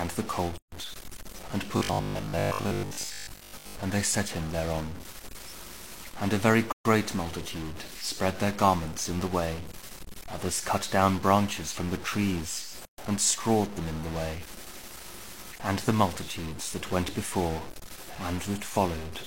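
Right through the clip there's a distortion, with quiet stretches filling up with hiss. That's likely a stuck bit in the data path.

At 0.58 to 0.72 s a gap at a join of encoded pieces opens, about 146 ms long, where separately encoded chunks were butted together with their padding left in.

From 1.77 to 3.75 s the sound turns into a stiff, metallic robotic buzz at 50 Hz, likely from repeated short buffers of about 20 ms. Most of that stretch is recycled audio rather than new material.

The same join gap comes back at 6.72 to 6.85 s and at 12.85 to 12.98 s, each about 130 ms, landing every 6 s at the piece boundaries.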